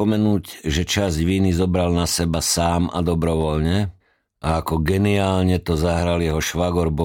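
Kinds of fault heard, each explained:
Nothing stood out on listening to the speech in this recording.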